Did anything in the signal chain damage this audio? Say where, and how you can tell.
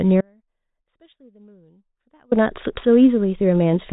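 Yes. An audio dropout to a faint residue runs from 0.21 to 2.32 s, cutting the speech abruptly for about 2.1 s while a faint leak of sound stays roughly 35 dB down. That points to a likely break upstream of a still-live path. The band limit near 3.8 kHz fits G.711 telephone coding.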